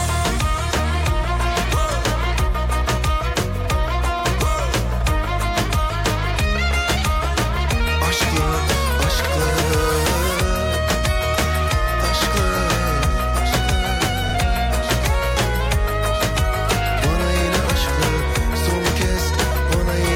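The audio stutters briefly at 4.19, 9.24 and 19.34 s. These are overlapping chunks: 5-second blocks start early, so 50 ms replays at each join.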